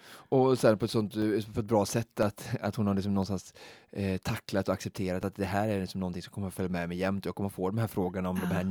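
From 1.22 s to 5.23 s, right after "sen på ett sånt", the speech has periodic USB or driver dropouts. A small tick cuts through the voice once every second, about five times in all. Each time, something briefly stalls the audio path. Around a millisecond of signal is lost and replaced by silence. The gaps are tiny and evenly spaced, so they sound like a steady, clock-like clicking. The clicking stops before "att det här är".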